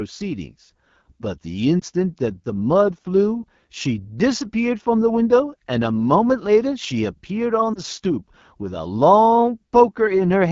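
AMR wideband (HD Voice) codec damage runs through the whole clip. The speech is squeezed through a low-rate vocal tract model, and the top band is filled with shaped noise. It sounds plainly rough and raspy, which fits the 8.85 kbit/s mode, one of AMR-WB's two lowest rates.

Lost AMR speech frames cause two brief dips, at 1.80 to 1.84 s and at 7.73 to 7.80 s. Each sounds like a single corrupted 20 ms frame. The decoder filled the gap by repeating the last good pitch and vocal tract settings at reduced gain, so each dip comes out as a short warble before the speech returns weak or rough for a moment.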